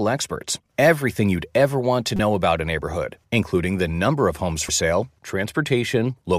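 At 2.16 to 2.20 s, between "you'd ever want to" and "about a neighborhood including", damaged data in a compressed stream makes the decoder misread a frame and lose sync. It sounds like a short glitch in the speech, and shows as a broadband smear. At 4.69 s, after "the number of homes", a second, briefer blip appears as a thin vertical streak on the spectrogram and a sharp discontinuity in the waveform.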